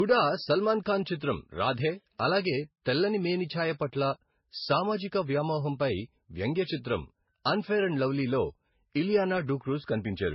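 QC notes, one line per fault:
throughout: transcoding between lossy codecs. The speech was likely encoded, then re-encoded by a second lossy codec, with artefacts pointing to low-bitrate MP3 then Vorbis. Each pass stacks its own smearing and swirl on the last's, and nothing remains above 5.6 kHz.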